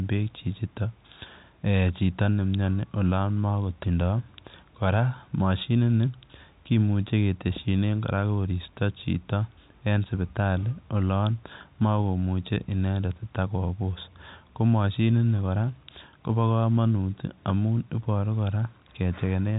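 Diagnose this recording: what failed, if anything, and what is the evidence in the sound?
Nothing failed: the speech comes through the G.711 telephone path as expected, with no fault evident in the sound.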